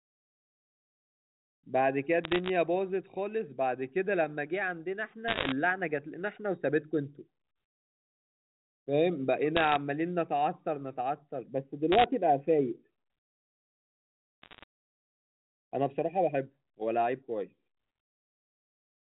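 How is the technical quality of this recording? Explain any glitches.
The recording has five short bursts of bit errors on a digital phone line, at 2.24–2.49 s, 5.28–5.52 s, 9.57–9.76 s, 11.92–12.04 s and 14.42–14.63 s. During each burst, bits in the G.711 mu-law stream were corrupted. Every flipped bit alters a single sample, and hits on sign or high-order bits throw it far off. This produces sharp ticks and crackle over speech that stays intact and limited to the 4 kHz telephone band. The burst at 5.28 s is densest.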